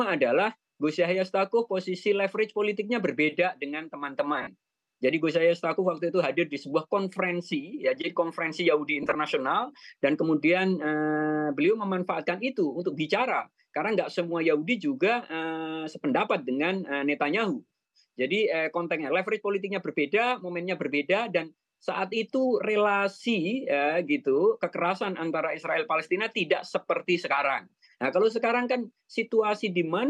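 Lost LE Audio frames at 4.42–4.47 s (about 45 ms) and 9.03–9.15 s (67.5 ms in brief runs of up to roughly 20 ms) make the LC3 decoder repeat the last spectrum with scrambled signs, smearing tones into short bursts of noisy wash.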